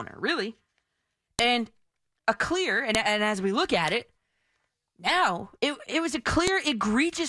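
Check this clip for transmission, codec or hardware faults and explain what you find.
There is one fault in this speech: file header played as audio, at 1.39, 2.95 and 6.47 s. Joined WAV pieces kept their header bytes, which play as sharp snaps, seen as lone waveform spikes and full-height vertical spectrogram lines.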